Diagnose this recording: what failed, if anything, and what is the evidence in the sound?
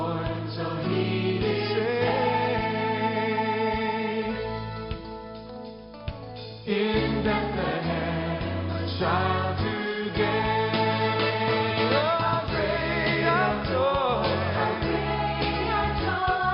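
Nothing in this recording points to a failure. No stage from capture through to playback leaves any audible sign of a fault.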